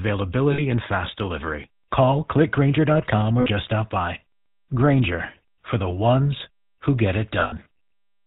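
Throughout the clip the speech has passed through the GSM full-rate codec, which fits the 13 kbps full-rate mode. The codec rebuilds speech from a vocal-tract model driven by a sparse, regularly spaced pulse excitation and discards everything above 4 kHz. The result is a dull, band-limited sound with a plainly audible buzzy, gravelly roughness laid over every syllable.

Lost GSM frames interrupt it three times. In each case the decoder had no good frames, so it reused the last good frame's parameters. From 0.52 to 0.60 s, just before "and fast delivery", about 60 ms is patched this way, which points to three 20 ms frames. The sound smears into a short, rough metallic ring. The same happens from 3.40 to 3.47 s, ahead of "stop by", for about 60 ms. The worst damage follows "the ones who get": from 7.40 to 7.67 s, about 260 ms of frames are lost, scattered across roughly half a second, with no single gap much over 70 ms. 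This produces a stuttering run of brief metallic rings, each one breaking the flow of the speech.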